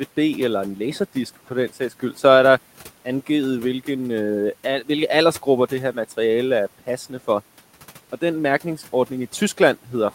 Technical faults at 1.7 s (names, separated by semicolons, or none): speech cut by the noise suppressor